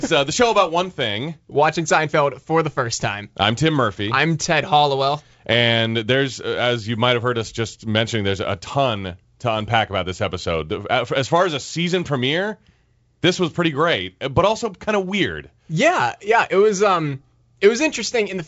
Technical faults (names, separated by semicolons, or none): none